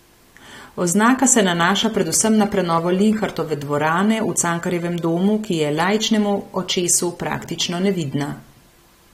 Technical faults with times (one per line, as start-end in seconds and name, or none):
1.83-3.30 train of clicks